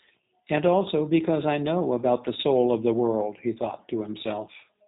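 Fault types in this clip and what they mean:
G.729 codec: The speech sounds narrow, slightly rough and synthetic, with plainly audible buzzy coloration and nothing above about 3.8 kHz, so sibilants and breath lose their brightness. The sound is not carried as a waveform but rebuilt at the far end from a model of the vocal tract, a pitch predictor and a few pulses in each short frame. Its sparse, rough character fits a low-rate coder of about 8 kbit/s.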